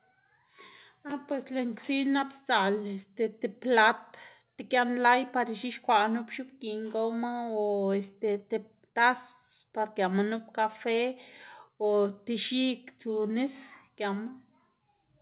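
No technical faults are audible in this speech.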